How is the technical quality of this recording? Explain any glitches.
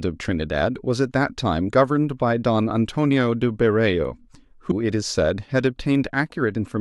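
The recording has two instances of compressed frames skipped. At 1.67 to 1.69 s roughly 50 ms of speech vanishes, and at 4.71 s about 150 ms is lost. In each case whole compressed frames were missing or rejected by the decoder, so playback leaps forward. On a waveform or spectrogram this shows as an abrupt discontinuity in the speech contours.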